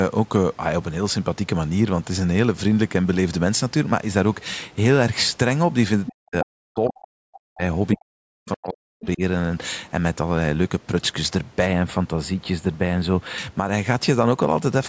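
Speech runs through most of the clip, and at 6.06 to 6.13 s a brief scrap of a second voice slips in underneath it, around 10 dB below the talker. This is likely the other side's voice leaking through: the far end was playing from the talker's loudspeaker, the microphone picked it up, and the echo canceller failed to strip that residue out for this short moment.

Right after, from 6.12 to 7.63 s and again from 7.95 to 9.21 s, the talker's own voice sinks. At its deepest it falls by something like 40 dB, close to vanishing. The likely cause is speech suppressed in double talk. With both parties talking at once, the canceller could not tell the near voice from the loudspeaker echo, so it clamped down on everything coming from the microphone.

From 11.66 to 13.38 s the sound turns hollow and phasey, with the top of the voice dulled. That is channel delay (comb filtering). One channel trails the other by only a handful of samples, about 0.07 ms, and when the two are folded to mono they cancel at regularly spaced frequencies. 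The first notch sits up near 7 kHz, just under the 8 kHz ceiling of the call's microphone processing.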